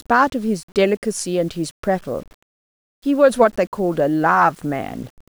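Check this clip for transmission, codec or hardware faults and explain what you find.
One fault runs through the whole speech clip: low bit depth without dither. The grainy distortion tracks the speech, getting grittier in quiet passages and fading out in the gaps, with noise around 35 dB below the signal. That fits audio likely rounded to 8 bits with no dither.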